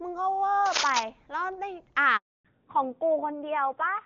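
From 0.66 to 1.03 s, dense, uneven bursts of scratching and rustling ride over the speech. They are roughly as loud as the speech itself. The texture is ragged rather than steady, like grit scraping past. This is cable scratch noise. It is likely caused by a worn cable, connector or control being moved, so that its contact resistance jumps about rapidly and adds noise to the signal.

At 2.17 s the speech dies away within a few tens of milliseconds. Silence follows until 2.45 s, a gap of 280 ms. This is a handover gap. The call was moved from one network link to another, and no speech frames arrived during the switch. Whatever was said in that stretch is simply missing. The speech resumes once the new link is running.

From 2.45 s to the end, the speech sounds noticeably duller and rougher. Nothing above 4 kHz remains, so the crisp sibilant detail is gone. This is a fallback to narrowband. 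Before the gap, the wider, clearer band comes from the AMR wideband (HD Voice) codec at a high rate, with little or no codec damage. After the handover, the call dropped to an older narrowband codec. The roughness fits a low-rate AMR narrowband mode, around 7.4 kbit/s.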